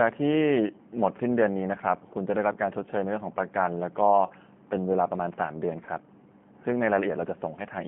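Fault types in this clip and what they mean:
G.729 codec: The speech passes through a narrow telephone band, roughly 150 Hz to 3.4 kHz, so nothing bright survives above it. The sound is rebuilt from a vocal tract filter, a pitch predictor and a few pulses per frame, which fits an 8 kbit/s codec such as G.729A. The damage is plainly audible. Speech stays intelligible but sounds rough and slightly synthetic throughout.
VoIP packet loss concealed by the speech codec: From about 4.27 to 4.32 s, roughly 30 ms of audio goes missing, which points to a single lost packet. The decoder fills the hole by repeating its last pitch and filter settings while lowering the gain. This leaves a brief smeared stretch. Each frame builds on the previous one, so the speech sounds weak or distorted for a short time after the gap.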